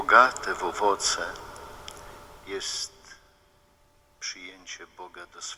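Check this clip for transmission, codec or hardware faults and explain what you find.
No transmission, codec or hardware faults can be heard in the clip. The level moves up and down smoothly, as a fader would, with no steps or jumps.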